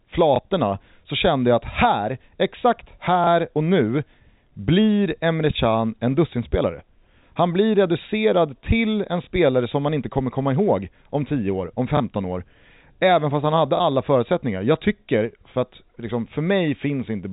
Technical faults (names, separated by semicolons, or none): packet loss with last packet repeated